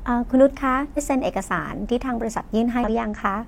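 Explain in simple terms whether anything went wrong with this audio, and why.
Compressed frames were skipped: chunks of the file went missing or were rejected, so the speech jumps ahead, losing nearly half a second at 0.93 s and about a fifth of a second at 2.84 s.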